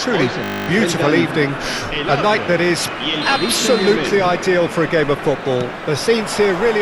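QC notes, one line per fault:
0.44–0.68 s, system hang loop: a frozen system left the hardware replaying one 20 ms buffer exactly 12 times, a steady 50 Hz buzz rather than silence or a dropout.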